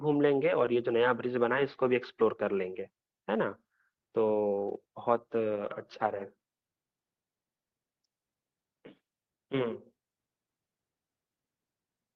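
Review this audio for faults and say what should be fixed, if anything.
No faults heard in the speech, so nothing needs fixing.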